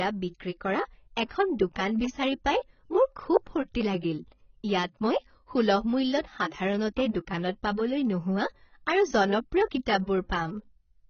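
Speech throughout sounds dull, smeared and watery, with nothing above about 6.6 kHz and a warbling fizz on sibilants. This is heavy AAC compression, likely AAC-LC at a bitrate as low as 16 kbps. Between 1.28 and 1.31 s, after "বিক্ৰী কৰা" and before "দোকান বিচাৰি পাই মোৰ", a brief hiss runs ahead of a softened attack. That is pre-echo: coding noise spread across the transform block fills the 26 ms before the onset.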